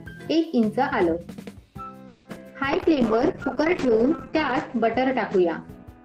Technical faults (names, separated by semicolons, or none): repeated packet loss (robotic sound); call bitrate drop; jitter buffer slow-down